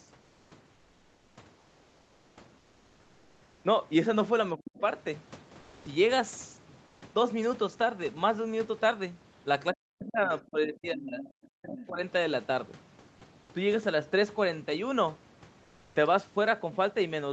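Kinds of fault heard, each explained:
Comfort noise in place of the background: The sender likely stopped transmitting during pauses, which points to Opus DTX, and the receiver synthesised filler noise. The real background in the gaps from 0.21 to 3.63 s, and at 5.59, 6.87 and 15.63 s, becomes a flat, featureless hiss, mostly about 3 to 5 dB quieter.
Speech suppressed in double talk: With both sides talking, the echo canceller seemingly could not tell the talker from loudspeaker echo and attenuated everything. The speech sinks sharply, by roughly 40 dB at worst, at 4.56–4.75 s and 9.73–11.22 s, and by roughly 25 dB at 11.46–12.0 s.
Other side's voice leaking through: Residual loudspeaker sound probably escaped the echo canceller into the microphone. Brief scraps of a second voice surface at 4.77–4.81 s, 11.2–11.3 s and 11.78–11.86 s, sitting roughly 15 to 25 dB below the main speech.
Onset clipped by the voice detector: The voice detector apparently reacted late when sound resumed, so its opening was never sent and comfort noise filled that slot. 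At 15.92 s the speech starts abruptly, its first 30 ms missing, losing the soft beginning right after the synthetic pause.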